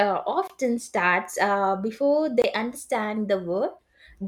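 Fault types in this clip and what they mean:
Bluetooth dropout: The sound cuts to silence twice, each hole about 21 ms long. The first is at 0.47 to 0.50 s, right before "starts uh before", and the second is at 2.42 to 2.44 s, just after "starts uh before". Each time the audio picks up again as if it had kept playing underneath, which fits a single lost packet. The likely cause is packets missing their deadline on the wireless link to the headphones and getting dropped.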